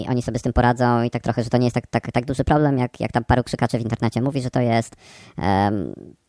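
Speech plays throughout about 1.38 times too fast and roughly 5.5 semitones high, a wrong sample rate fault consistent with 16 kHz audio played at 22 kHz. On a spectrogram, harmonics and formants sit shifted upward and syllables appear squeezed in time.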